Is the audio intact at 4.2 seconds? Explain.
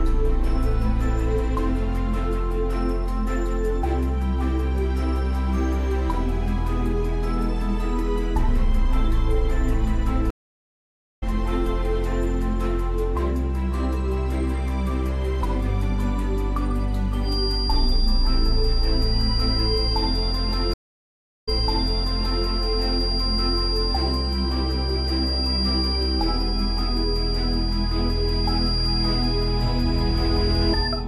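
Yes, the audio is intact at 4.2 seconds, with no dropout, click, distortion or other fault at that moment.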